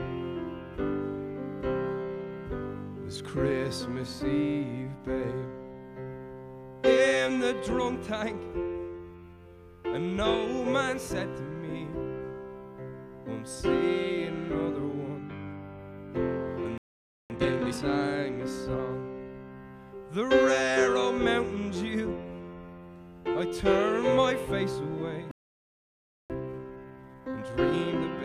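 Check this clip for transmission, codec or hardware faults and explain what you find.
Two playback stalls occur, each followed by time-compressed catch-up.

A playback stall occurs at 16.78 to 17.30 s (0.52 s) and at 25.31 to 26.30 s (0.99 s). The sound stops dead in mid-flow, likely because the player ran short of data or its thread was blocked. On the waveform each appears as a flat line, and on the spectrogram as an empty vertical band.

Time-compressed catch-up follows each gap, running at 17.30 to 17.82 s at 2.0 times speed, then from 26.30 s to the end at 1.25 times. The player drops short slices of its backlog and cross-fades the joins, so the sound rushes with its pitch unchanged. On the spectrogram the harmonics stay at the same heights while events crowd closer together in time.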